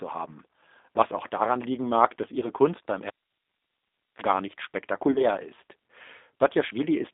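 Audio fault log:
Throughout: G.729 codec. The speech is confined to roughly 250 Hz to 3.7 kHz, so it sounds thin and dull. It has a rough, slightly synthetic grain, typical of a model-based coder that fits 8 kbit/s.
2.40 to 2.48 s and 5.12 to 5.29 s: VoIP packet loss concealed by the speech codec. The first gap fits one lost 20 ms packet. The second gap fits two packets, about 40 ms. The decoder repeats its last pitch and filter into a fading buzzy tone or coloured noise. The sound stays weak briefly afterwards.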